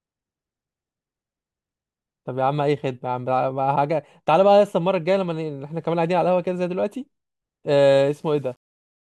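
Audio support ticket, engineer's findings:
Likely requantisation to about 9 bits with rounding and no dither, 7.83 to 9.08 s: low bit depth without dither makes speech grainy, error tracking the signal, roughly 40 dB down.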